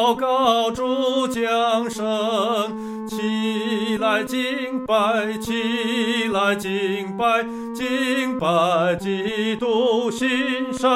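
De-emphasis applied wrongly from 8.76 s to the end: an unneeded treble-cut filter tilts the highs down about 8 dB at 10 kHz, leaving the sound dull and muffled.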